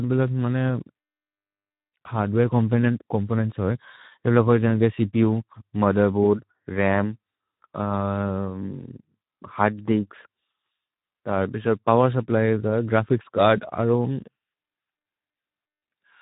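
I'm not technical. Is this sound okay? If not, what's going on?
No, not quite. The whole recording, from start to finish, has been squeezed through the Speex codec, an older speech format from internet calls and game chat. It spends very few bits on the fine detail, so the speech comes across hoarse and noisy. It also discards everything above roughly 3.8 kHz, which is why the voice sounds muffled and phone-like rather than clear and crisp.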